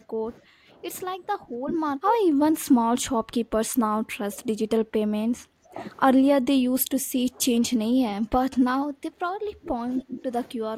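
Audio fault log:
0.00–0.83 s, 1.16–5.81 s, 6.42–10.32 s, 10.55–10.77 s: speech suppressed in double talk. The voice dips by up to about 20 dB, likely because an echo canceller turned down the talker along with the echo while the far side spoke.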